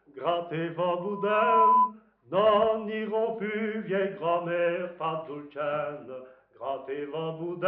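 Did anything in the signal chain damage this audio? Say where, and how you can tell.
Yes. A loudspeaker feedback squeal runs from 0.99 to 1.93 s: a single 1 kHz tone swells over roughly 0.7 s to around 10 dB above the sound. It comes from the analogue acoustic path, where the microphone picks up its own loudspeaker and loop gain at 1 kHz exceeds unity.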